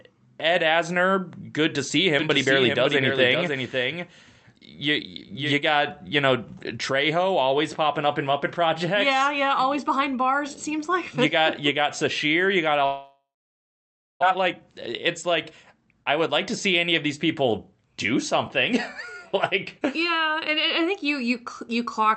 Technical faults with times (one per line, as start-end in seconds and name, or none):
2.19-5.53 doubled audio track
12.85-14.24 long network dropout
14.34-16.44 jitter buffer speed-up
16.91-19.03 jitter buffer speed-up